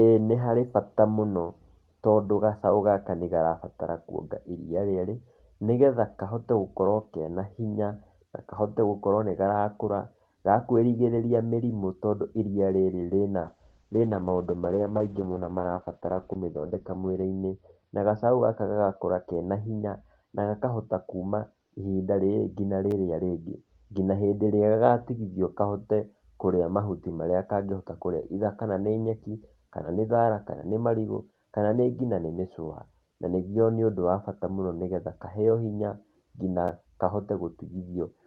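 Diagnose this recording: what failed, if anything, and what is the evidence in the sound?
A call bitrate drop at the network and codec stage runs from 13.41 s, just after "tondũ iria rĩrĩ rĩna", to 25.57 s. The speech turns muffled and rough as Opus falls from 32 to 8 kbps and holds its lowest rate for about 3.85 s. On a spectrogram, the upper edge of the energy steps down from 12 kHz to 6 kHz.

A repeated buffer at the driver or buffer stage is heard at 22.91 s and 36.68 s as a tiny click or brief buzz. The last block was played once more because fresh audio arrived too late. The waveform shows a duplicated 10 ms segment with a hard discontinuity at each join, which fits a 10 ms buffer.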